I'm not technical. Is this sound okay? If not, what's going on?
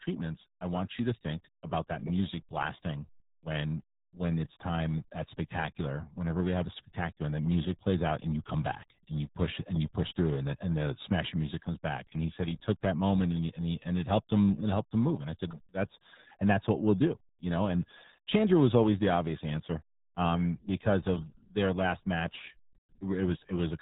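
No. The speech was squeezed through the RealAudio 14.4 codec, an old format built to send speech over dial-up modems. To fit through such a narrow connection it throws away everything above about 3.8 kHz and simplifies the rest heavily. From start to finish, that leaves the speech muffled and dull, with a gargling, underwater quality, as though heard down an old telephone line.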